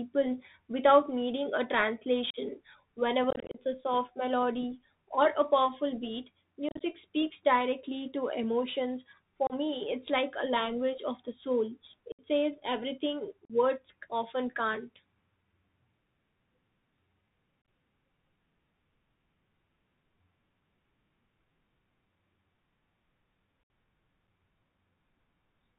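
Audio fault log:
Throughout: Bluetooth CVSD headset codec. The speech is confined to a narrowband telephone channel, with nothing above 4 kHz. The rough, grainy tone points to a 64 kbps CVSD link, where each sample is a single up-or-down bit with an adaptive step. Loud, bright sounds outrun that step and distort. S sounds come out scratchy. A granular hiss sits under the speech the whole way.
2.30–2.37, 3.30–3.59, 6.69–6.81, 9.47–9.53, 12.12–12.20, 13.45–13.52, 17.62–17.68 and 23.63–23.70: unconcealed Bluetooth headset packet loss. Short voice packets between headset and phone went missing and were replaced with silence or an idle pattern rather than patched over. Each loss leaves an abrupt hole that can click at its edges. The speech returns briefly quieter as the CVSD step size recovers. The 3.30 event is worst: about 143 ms lost, scattered across 240 ms, so it sounds chopped and crackly.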